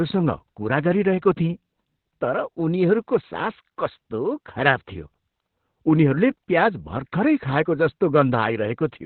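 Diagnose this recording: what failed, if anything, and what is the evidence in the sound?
Codec stage: Opus voice compression throughout; speech is muffled, hoarse, robotic, with the spectrogram empty above 4.3 kHz, fitting narrowband SILK at about 8 kbps.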